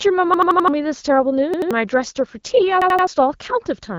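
Repeated buffer stutters at 0.34–0.68 s, 1.54–1.71 s and 2.82–3.07 s: audio arrived late, so an 85 ms chunk (likely a 4096-sample buffer) replays with hard joins.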